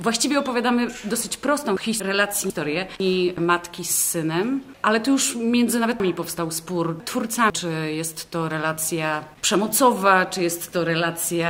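Audio chunks played out of order twice. From 2.0 to 3.0 s, one 500 ms chunk was written a chunk late, so it plays after its successor and the two halves swap. From 6.0 to 7.5 s, a chunk ran two chunks late, so it plays after the two that should follow it. Nothing is missing, but each span sounds jumbled, with three hard joins.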